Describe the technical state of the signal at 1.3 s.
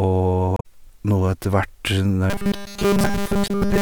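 At 1.3 s the speech signal is intact, with no audible technical fault at that moment.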